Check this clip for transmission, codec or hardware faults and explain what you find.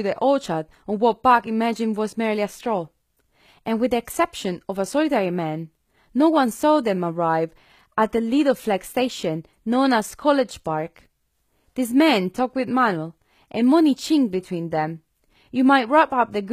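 One codec fault runs through the whole speech clip. Plainly audible HE-AAC compression, likely at a bitrate around 20 kbps, rebuilds the treble from copied lower bands, so s sounds turn gritty and lispy. A spectrogram shows blocky, repeated treble patterns with nothing above 14.9 kHz.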